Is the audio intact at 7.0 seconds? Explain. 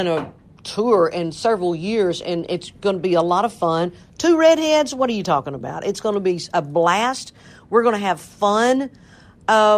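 Yes, the audio is intact at 7.0 seconds, with no dropout, click, distortion or other fault audible at that moment.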